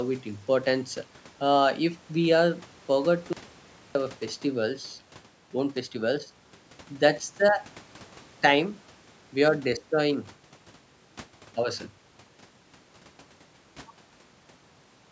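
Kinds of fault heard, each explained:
Audio dropout to silence: the speech cuts off at 3.33 s into silence, no room tone, for about 0.62 s, likely from lost input.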